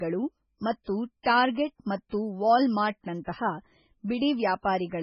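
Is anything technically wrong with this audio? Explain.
Yes. The whole speech clip carries heavy MP3 compression, likely from a very low bitrate around 16 kbps. Nothing remains above 9 kHz, and weak frequency lines drop in and out between frames. The result sounds watery and swirly, with metallic chirps on s sounds.

Pre-echo occurs at 0.84–0.87 s, 1.53–1.56 s and 3.24–3.27 s. Quantisation noise sized for each sharp attack spreads back across its block, about 30 to 36 ms, so a short hiss comes before the onset and softens it.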